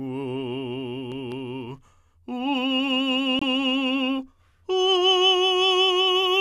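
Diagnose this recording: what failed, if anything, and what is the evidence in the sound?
A corrupt frame muted at the codec stage: the music drops to abrupt silence from 3.39 to 3.43 s, one frame long, and resumes on time, unlike a buffer dropout that shifts timing.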